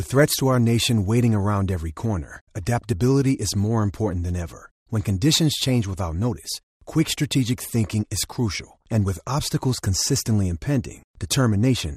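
Throughout the speech, a dull, gurgling, granular texture points to MP2 compression, likely at around 80 kbps. Too few bits leave upper sub-bands switched off or flickering, coarsely quantised; a plain low-pass would dull the sound without that churning grain.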